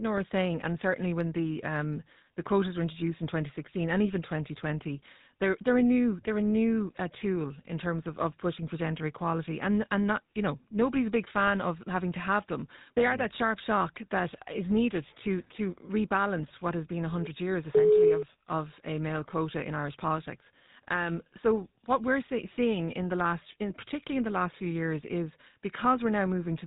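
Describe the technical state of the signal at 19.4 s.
At 19.4 s the speech sounds buzzy and gravelly, with nothing above 4 kHz, as it does across the whole clip. This is GSM full-rate codec damage: the vocal tract is modelled and driven by sparse regular pulses, consistent with 13 kbps coding.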